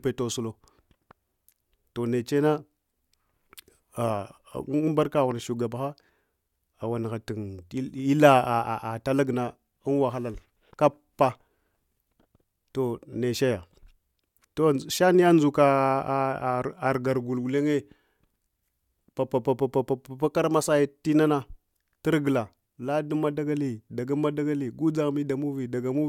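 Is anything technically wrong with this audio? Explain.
No, nothing in this speech recording stood out as technically wrong on listening.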